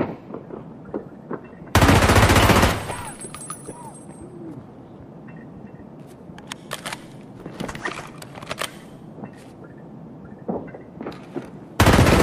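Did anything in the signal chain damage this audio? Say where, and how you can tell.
No, no signal-chain damage audible.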